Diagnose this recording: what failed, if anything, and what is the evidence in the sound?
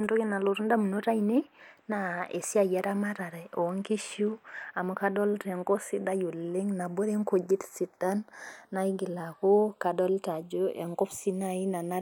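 The two channels are drifting apart throughout the speech, a clocking fault at the converter stage. The left and right signals come from devices running on separate clocks that disagree by some tens of parts per million, so the inter-channel delay creeps steadily and reaches a fraction of a millisecond. Folded to mono, the resulting comb-filter notches glide slowly across the spectrum, giving the whole recording a gradual, sweeping flanger colouration.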